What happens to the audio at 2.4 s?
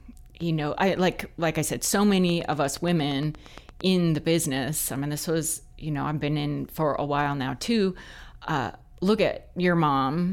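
A train of clicks runs from 2.30 s to 3.82 s, most likely from interference from nearby equipment or a faulty connection or power supply, injecting a brief pulse into the signal at a steady 8.6 times per second. Around fifteen near-identical clicks land evenly spaced across that stretch, peaking a few dB above the speech. They come through as a regular ticking laid over the speech, staying audible in the pauses as well.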